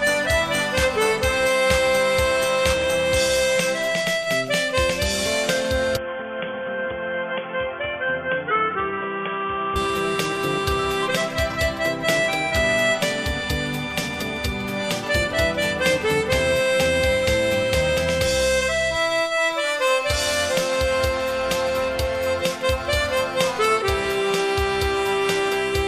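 From 5.97 to 9.76 s the sound abruptly turns dull and boxy, with nothing above 3.4 kHz, a level drop of around 5 dB and a new background noise roughly 30 dB down, then clears again. The likely cause is an input switched to a poorer device.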